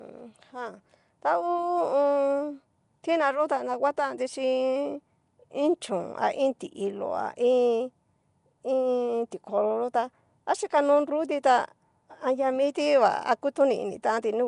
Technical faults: Nellymoser compression

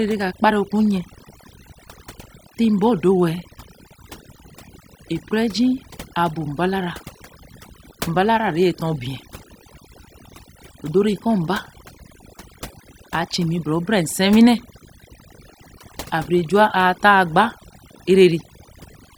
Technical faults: overdone noise removal

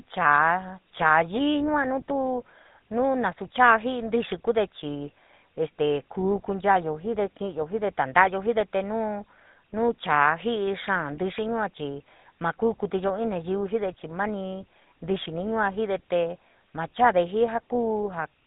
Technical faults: GSM full-rate codec

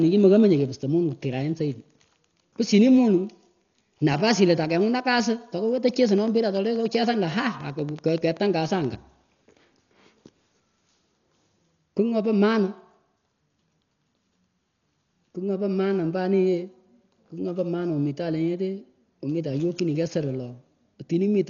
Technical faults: Dolby Digital compression; train of clicks

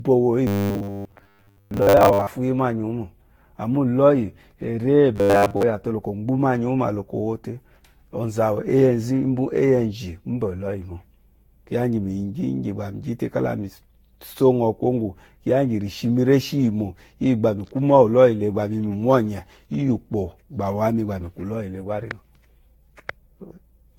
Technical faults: generation loss; robotic sound from repeated short buffers

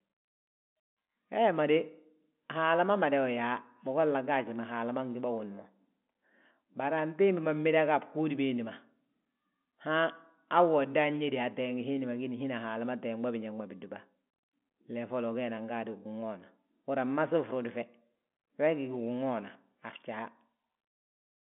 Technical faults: none

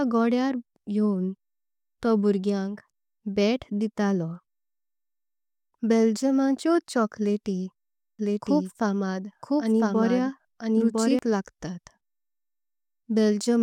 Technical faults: doubled audio track

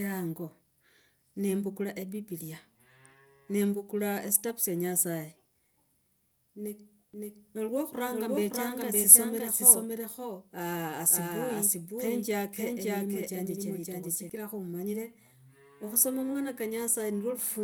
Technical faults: doubled audio track

